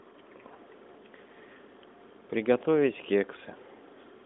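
No technical faults are present in the speech: it passes through an AMR narrowband mobile codec path working as intended, with the audible band confined to roughly 200 Hz to 3.6 kHz and only light coding colour, which fits the codec's highest 12.2 kbps mode.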